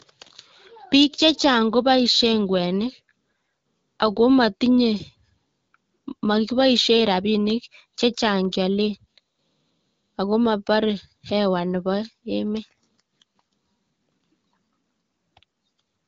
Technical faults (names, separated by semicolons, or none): none